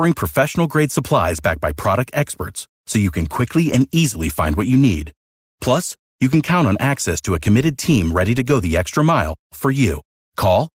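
From 3.4 s, just after "experts so you can", a call bitrate drop sets in and lasts until 7.09 s, clearing before "to a committed team". The coarser encoding makes the speech sound rougher and more watery, with the worst stretch holding for about 3.1 s. This fits the bandwidth estimate falling and the encoder being pushed from roughly 32 kbps down to 18 kbps. Quality returns once the estimate recovers.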